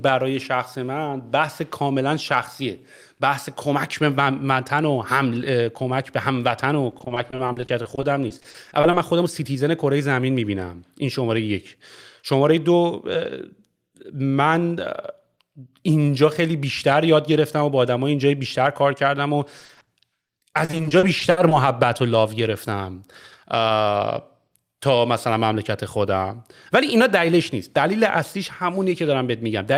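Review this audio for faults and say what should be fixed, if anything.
Repeated packet loss (robotic sound) hits the speech three times: 6.91 to 8.95 s, 19.60 to 19.89 s, and 20.27 to 21.53 s. Short chunks keep dropping out. Each hole is bridged by stretching the sound just before it. The holes come close together, so the voice turns choppy. Single gaps last up to 40 ms, and 60 ms in the last stretch. The brief middle stretch is worst, with nearly half of it patched. Fix it with a more reliable network path and a larger jitter buffer.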